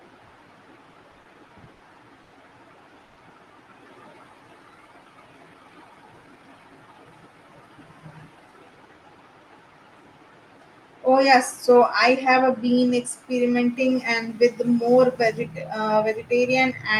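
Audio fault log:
0.93–1.81 s, repeated stalls (stutter): six short holds, the longest 50 ms and 140 ms in total, as the jitter buffer kept running dry, so the sound drags in a series rather than once.
2.23–2.34 s, short stall from a late packet: one sound is held about 90 ms until the late packet arrives, then continues from the same point, a single stretch with a slight buzz or dip.
3.04–3.18 s, call audio freeze: the last sound continues as a fading buzz or hiss for 120 ms without dropping to silence, likely from packets held up in transit emptying the buffer.
5.54–6.43 s, jitter buffer speed-up: the audio runs about 11% fast at unchanged pitch, with roughly a tenth of a second cut out in small pitch-period pieces to shrink a backlog.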